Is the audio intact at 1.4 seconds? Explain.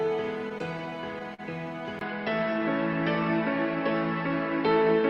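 No, 1.4 s is the tail of the repeated stalls (stutter) running from 0.49 s. Packets kept arriving late, draining the jitter buffer seven times, and the receiver stretched the last sound to bridge about 109 ms, up to 44 ms at once. Nothing is lost, but the audio drags and stutters.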